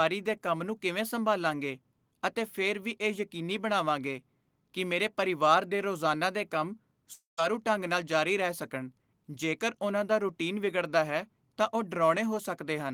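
At 7.13 s, a long network dropout likely halted the stream: sound smears into a fading buzz, then silence until 7.39 s, losing 0.24 s.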